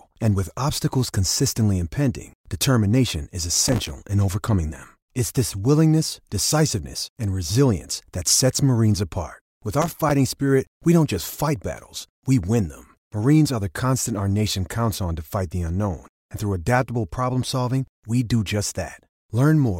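Speech with two bursts of processor overload crackle, from 3.55 to 3.90 s after "consistently impending determination is" and from 9.82 to 10.11 s before "spirit we don't just". Around twenty buffers of roughly 3 ms each miss their deadline and drop to silence, giving gritty tearing.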